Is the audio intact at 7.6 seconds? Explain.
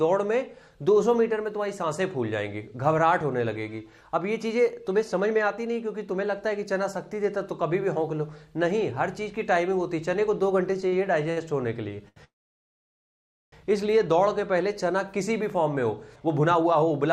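Yes, at 7.6 seconds the audio plays through intact, with no dropout, click, distortion or other fault at that moment.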